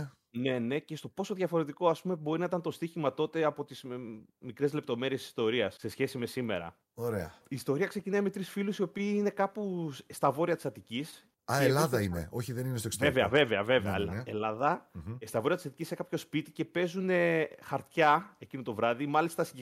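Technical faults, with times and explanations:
No technical faults found anywhere in the speech recording.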